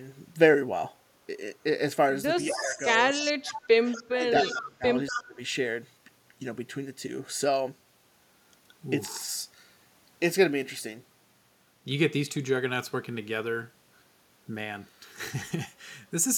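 Throughout the recording a steady buzz at about 43.1 Hz runs under the speech, the signature of a block size mismatch (truncated). One stage writes blocks longer than the next stage reads, which fits a 1024-sample write, and the tail of each block is discarded, leaving a seam at the block rate. The speed here stays at 1.0x, so the pace and pitch of the speech are unchanged. The buzz is locked to the block rate rather than to any mains frequency, which separates it from hum.

Between 2.49 and 5.39 s the speech level drops in three stretches: 2.49 to 2.78 s by about 10 dB, 3.10 to 3.62 s by about 35 dB, and 3.97 to 5.39 s by about 25 dB, with roughly a second affected in that last span. This is speech suppressed in double talk, likely caused by both sides talking at once, so the echo canceller turned down the local talker along with the echo.

Overlapping those dips, echo leak is heard at 2.56 to 2.87, 3.20 to 3.54, 3.92 to 4.03, 4.43 to 4.69 and 5.07 to 5.22 s. 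It is a copy of the speech delayed by 241 ms, about 15 dB below the speech in most bursts, about 25 dB below at 3.92 s and about 10 dB below at 5.07 s. The cause is likely a loudspeaker at the far end whose canceller let part of its microphone pickup through. The fixed 241 ms delay and the short, scrappy bursts distinguish it from room reverberation.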